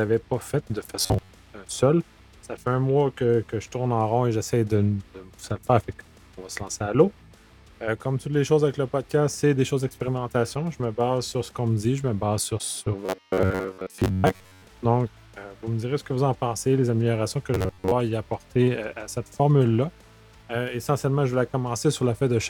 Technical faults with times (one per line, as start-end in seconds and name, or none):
0.99-1.29 robotic sound from repeated short buffers
13.06-14.64 robotic sound from repeated short buffers
17.54-17.94 robotic sound from repeated short buffers